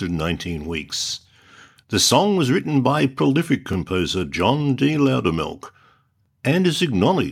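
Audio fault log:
1.21, 3.73 and 6.26 s: overlapping chunks. A 23 ms sliver replays at each 2.5 s join, a repeating stutter rather than a dropout's gap.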